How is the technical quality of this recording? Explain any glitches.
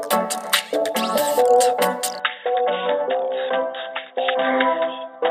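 Input switched to a poorer device, from 2.2 s to the end of the clip. The audio changes character at that point with no gap: nothing is left above 3.8 kHz, the level drops by roughly 5 dB, and a new background noise appears about 50 dB below the signal. The likely cause is the system changing its input mid-recording to another microphone or a headset's call profile, whose narrower band and own noise give the dull, boxy sound.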